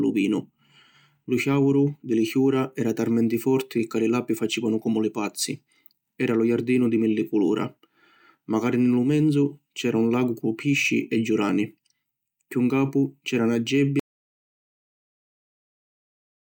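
At 14.00 s, right after "c’era na", the speech stops dead in an audio dropout to silence that runs the last 2.5 s to the end. Unlike a pause or fade, even the room tone vanishes into silence, likely from a lost input.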